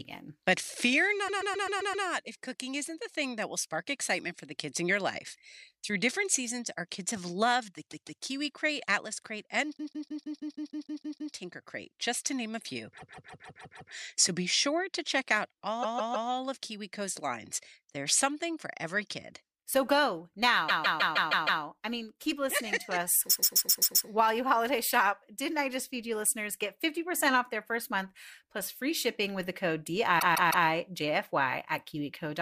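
A stuttering loop of about 130 to 160 ms repeats 2 to 10 times at 1.27–2.05 s, 7.90–8.22 s (after "kids have loved the"), 9.76–11.33 s, 12.97–13.91 s, 15.82–16.29 s (after "sure to check out"), 20.68–21.62 s (before "I mean keep listening"), 23.29–24.07 s and 30.19–30.66 s. These are repeated frames: a block of compressed frames, which fits five or six frames, was written again, so the decoder replays it and the speech stretches by up to 1.6 s per event.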